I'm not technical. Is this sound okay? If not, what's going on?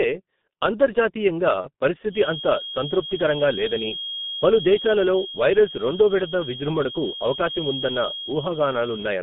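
No. Throughout the speech, the G.723.1 codec, an old internet-phone compression, makes voices sound muffled and hoarse. Sharp consonants blur, and nothing above about 3.6 kHz gets through.

From 1.61 to 1.68 s there is VoIP packet loss concealed by the speech codec. A missing chunk, likely one lost packet, is patched over with a brief buzzy or noisy smear.

From 2.05 s to the end, a thin high whistle near 3.3 kHz, slowly swelling and fading, sits quietly behind the speech. This is likely a feedback whistle from a loudspeaker leaking into the microphone.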